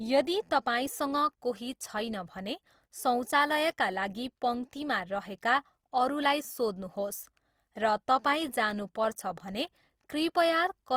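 Opus compression marks the speech from start to finish. The damage is plainly audible. It sounds grainy and rough rather than swirly. Tonal parts of the speech turn noisy. When bits run short, the encoder refills bands with folded or noise-like energy instead of leaving holes. The bandwidth stays full, reaching about 20.2 kHz. The likely cause is Opus in its music mode at a low bitrate, which fits roughly 24 kbps.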